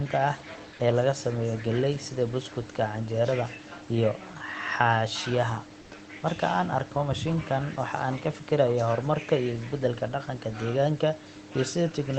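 A DC offset runs through the whole recording. The waveform sits shifted away from the zero line, and the spectrogram shows a steady band of energy at the very bottom.

From 5.81 to 5.91 s, about 100 ms of the room background becomes smooth, featureless hiss about 3 dB quieter. This is likely comfort noise filling a discontinuous-transmission pause, and the spectrogram shows a flat, textureless patch.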